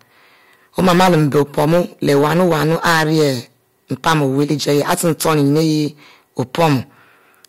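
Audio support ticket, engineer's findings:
Hard clipping, whole clip. Harsh fuzz on every loud speech syllable. Stage driven about 16 dB past its ceiling, peaks sheared flat. Roughly one sample in 25 was over the limit. Waveform: squared-off tops. Spectrogram: vertical smears of harmonics rising toward the top band. Likely gain staging before converter or fixed-point stage.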